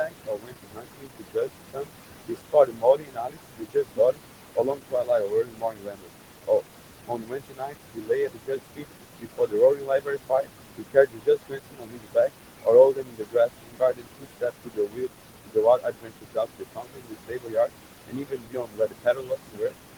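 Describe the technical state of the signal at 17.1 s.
Noise suppressor artifacts are present at 17.1 s, as they are across the whole recording. The suppressor estimates which frequency bands hold steady background noise and pulls them down frame by frame, here by about 21 dB. The room noise, which sits only about 9 dB below the speech, drops away in the gaps and swells back under the talking.

Speech cut by the noise suppressor also affects 17.1 s, within a span running from 0.01 s to the end at 19.98 s. The suppressor mistakes quieter parts of the voice for background and turns them down along with it, at worst by about 22 dB. Soft consonants and word endings sound swallowed or faint rather than cleanly articulated.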